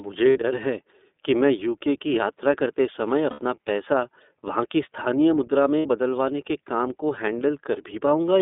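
iLBC codec throughout the speech: the band runs only from about 250 Hz to 3.6 kHz, and the voice has a rough, slightly synthetic edge. Each frame's excitation is coded independently, which fits the 13.33 kbps mode with 30 ms frames.

Lost iLBC frames occur at 0.29–0.38 s, just before "है कि मैं यू"; at 3.30–3.41 s, between "की यात्रा करते समय" and "पैसा वहाँ की स्थानीय"; and at 5.79–5.86 s, between "वहाँ की स्थानीय मुद्रा" and "बदलवाने के काम को". Each gap lasts roughly 60 to 90 ms, consistent with two or three missing frames. The decoder repeats the last pitch cycle blended with noise, so each gap sounds like a brief held, buzzy vowel. The voice is right again almost immediately afterward.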